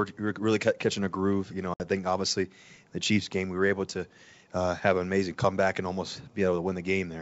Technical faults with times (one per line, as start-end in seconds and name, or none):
1.74-1.81 packet loss on an ADPCM call